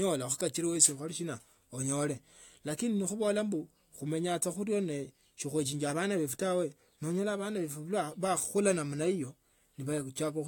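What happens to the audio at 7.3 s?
Nothing goes wrong at 7.3 s; the speech runs through that moment intact, with no dropout, click or distortion.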